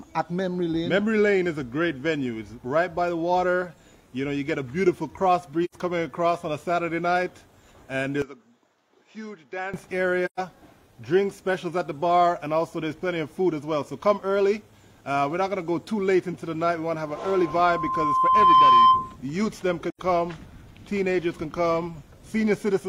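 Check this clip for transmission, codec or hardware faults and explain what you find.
Three kinds of fault are present: repeated AAC frame loss with muting, a likely switch of input to a poorer device, and a loudspeaker feedback squeal.

AAC frame loss with muting happens three times: 5.64 to 5.75 s, 10.25 to 10.40 s, and 19.90 to 19.99 s. The gaps last about 85 ms, 128 ms and 85 ms, which fits two, three and two lost frames. The decoder zeroed the missing spectra, and the overlapping transform windows taper the sound down and back up. Each gap is therefore a soft-edged hole. That distinguishes it from a hard dropout or buffer underrun, which cuts off abruptly and usually clicks.

From 8.22 to 9.74 s the sound turns duller and quieter. This is most likely an input switched to a poorer device. Nothing reaches above 7.6 kHz, the level falls by around 10 dB, and a new noise floor sits roughly 50 dB below the signal. 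There is no silence at the change. A codec dropping to a lower bandwidth would narrow the band without shifting the level and background noise together. Here all three change at the same moment and then revert.

A loudspeaker feedback squeal runs from 17.14 to 19.16 s. The microphone picks up its own loudspeaker, and at 1 kHz the loop gain exceeds one, so that frequency keeps amplifying itself. It swells over about a second and a half until it stands roughly 10 dB above the rest of the sound. A steady test tone or mains hum would stay at a constant level. This tone grows by itself, which is the mark of feedback.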